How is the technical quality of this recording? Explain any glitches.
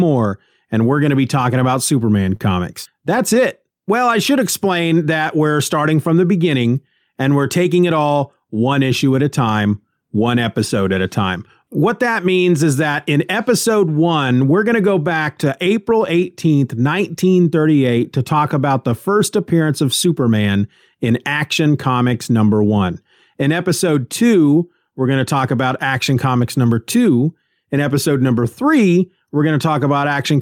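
The recording has four playback glitches, all caused by packets lost or reaching the receiver at uneven times.

A short stall from a late packet occurs at 2.36 to 2.41 s. With the jitter buffer empty, the last sound was held for 36 ms. Nothing is lost, just a brief drawn-out moment.

Scattered short gaps run from 2.84 to 3.36 s. About four small holes, each around 10 ms at most, were patched by continuing the sound, giving brief ticks or smears.

A jitter buffer slow-down follows "to go back to", from 15.63 to 17.45 s. Repeated pitch periods added 118 ms to rebuild the buffer, so the speech runs at 94% speed at unchanged pitch.

A jitter buffer speed-up follows "talk about the first", from 19.45 to 20.49 s. About a tenth of a second of pitch periods was cut to shrink the delay, so the speech sounds hurried at 108% speed.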